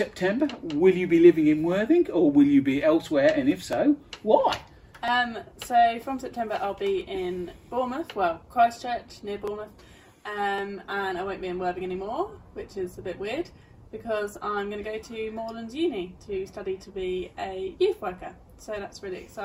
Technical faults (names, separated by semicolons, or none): dropped samples; call bitrate drop